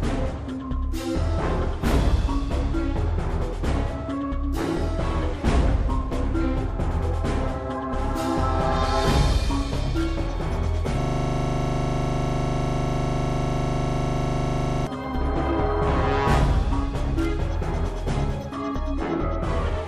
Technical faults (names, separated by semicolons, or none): system hang loop